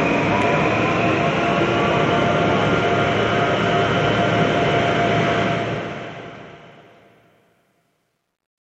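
A fade-out stage on this recording of everyday sounds keeps too few bits and adds no dither, which fits an output around 11 bits deep, so truncation distortion on the fade runs from 5.38 s to the end. As the level drops toward the smallest step, the waveform collapses into coarse square steps. From 6.69 s onward the tail turns gritty.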